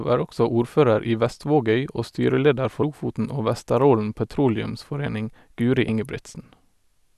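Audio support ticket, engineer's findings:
Compressed frames skipped at 2.82 s and 5.88 s. Speech jumps ahead roughly 100 ms, then roughly 50 ms. Decoder is not playing missing or damaged frames, with jump sizes consistent with whole 26.1 ms frames. Overlap between neighbouring frames smears each join into a brief blip, not a click.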